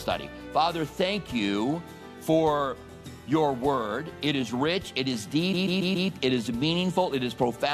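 A stutter from 5.53 to 6.09 s replays the same 139 ms block four extra times: repeated frames, fitting about six compressed frames resent, adding 0.56 s.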